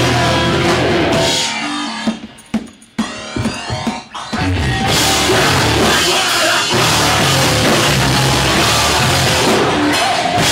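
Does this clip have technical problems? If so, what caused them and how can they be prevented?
No, nothing technical stands out here; the audio comes through without any glitches, so there's nothing that needs preventing.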